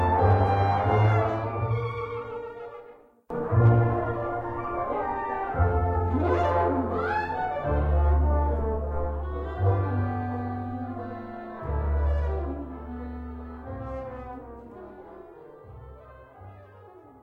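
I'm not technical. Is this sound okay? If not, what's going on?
No. There is hard clipping twice: briefly from 0.26 to 0.33 seconds, and again from 3.64 to 3.69 seconds, where the overload is greater. The loudest moments were too big for the recording to hold, so their tops got chopped flat, adding a crackly fuzz only on those peaks, unlike steady background hiss.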